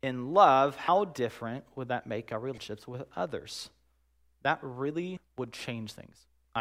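At 0.88, 2.58 and 5.17 s, compressed frames skipped: the speech jumps ahead by roughly 0.1, 0.3 and 0.15 s, fitting whole 32 ms frames.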